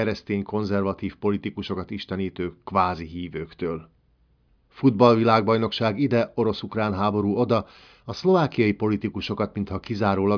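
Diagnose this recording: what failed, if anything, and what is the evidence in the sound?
Nothing failed in this recording, and no fault shows up anywhere in the sound.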